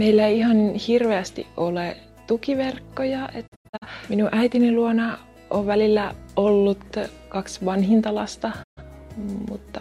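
At 3.46 s a digital broadcast dropout breaks the sound into several short holes spread over 3.46 to 3.86 s, about 213 ms lost in all, the longest stretch 85 ms. A second dropout mutes a 128 ms gap at 8.62 s. Each gap fades out and back in over 20 ms, and the lost lengths fit whole frames of about 43 ms. The receiver muted failed frames rather than concealing them, so the gaps are true silence, with no clicks or smeared sound filling them.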